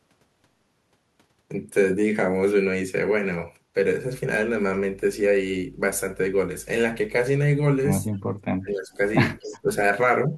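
At 8.13 to 8.19 s a brief echo leak appears: a very faint trace of the speech returns about 231 ms late, far below the direct signal. It is likely that a far-end loudspeaker fed a microphone whose echo canceller let this scrap slip through. It differs from room reverberation because it is a discrete repeat at a fixed delay rather than a smooth decaying tail.

Speech suppressed in double talk follows from 8.59 to 9.0 s and from 9.38 to 9.69 s, where the voice sinks steeply, by something like 20 dB, and again at 10.27 to 10.34 s with only a slight dip. The likely cause is an echo canceller that, with both ends talking, could not separate local speech from echo and attenuated everything.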